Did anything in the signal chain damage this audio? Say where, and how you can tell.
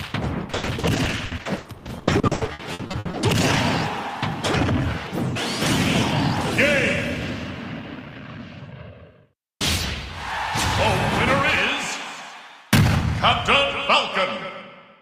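Yes, the network stage. From 0.51 to 3.15 s the sound turns choppy, with pieces audibly missing. This is repeated packet loss: about two dozen holes follow one another in quick succession, the longest around 80 ms. Each is patched by extending the last received sound, so roughly 1 s in total, about 39% of that stretch, is filler rather than real audio.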